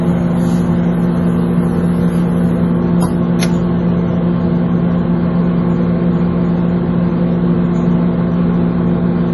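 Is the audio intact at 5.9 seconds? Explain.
No. At 5.9 seconds, as throughout the clip, there is MP3 compression damage, likely from a starved encoder near 32 kbps: nothing above 11.5 kHz remains, and dropped weak frequency lines leave a heavy watery, swirling smear.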